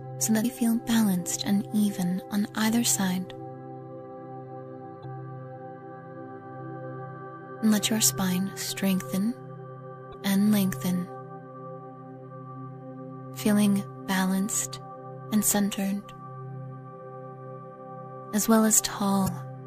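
The audio has four short bursts of damaged data in a compressed stream, at 0.41–0.45 s, 5.01–5.05 s, 10.10–10.14 s and 19.24–19.29 s. Each lasts about 40 ms and sounds like a brief chirp or blip. Corrupted bytes make the decoder misread frames and lose sync.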